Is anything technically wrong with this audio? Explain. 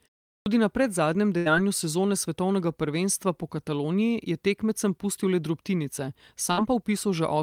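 Yes. At 0.41 s, after a pause of 0.41 s, the speech starts with a clipped start after a pause. About 51 ms of its opening is missing. The output device had gone idle in the silence and took time to wake. So the sound begins abruptly, without its first part.

There are two bursts of packet loss. At 1.37 s, about 80 ms of audio is missing and 81 ms was filled in. At 6.51 s, 60 ms is missing and 57 ms filled. The receiver stretched the last sound and faded it. This gives a brief held buzz or fading hiss, then a jump ahead.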